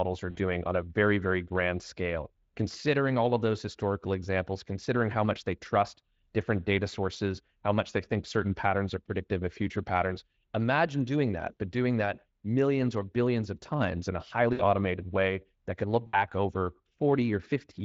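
VoIP packet loss concealed by the speech codec hits at 0.31 s before "on a very very", at 14.53 s before "way that can look", and at 16.07 s after it. The decoder stretches the last sound into a fading buzz or coloured noise, over gaps of about 40 and 60 ms.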